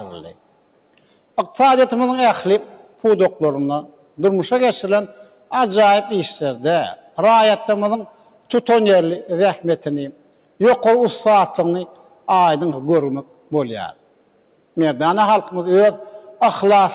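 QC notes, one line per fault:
throughout: noise suppressor applied to music or sounds. A speech-oriented suppressor treats steady and decaying content as noise, so the level swings by around 5 dB.
0.34–1.37, 2.78–4.18, 5.11–5.51, 6.96–8.50, 10.12–10.60, 11.87–12.28, 13.24–14.77 s: sound cut by the noise suppressor. Sustained or fading parts of each span are mistaken for noise and pulled down, each reaching about 12 dB below the surrounding level.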